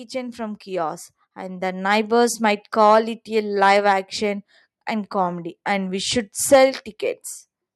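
Automatic gain rising runs from 0.11 to 2.44 s. The gain control judged the input too quiet and raised its level step by step, by about 9 dB in total, so the voice and the background noise swell upward together over those two-odd seconds.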